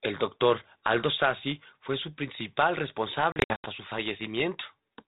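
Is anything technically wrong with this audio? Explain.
Yes. From 3.32 to 3.66 s, packet loss on an ADPCM call leaves scattered silent gaps, about ten packets' worth. The waveform shows flat holes, and after each one the speech returns slightly distorted while the decoder's predictor falls back into step. The G.726 codec at 32 kbit/s keeps nothing above 4 kHz.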